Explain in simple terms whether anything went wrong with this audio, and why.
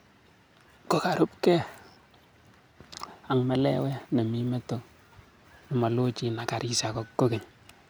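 Nothing went wrong with this audio; there are no audible faults in it.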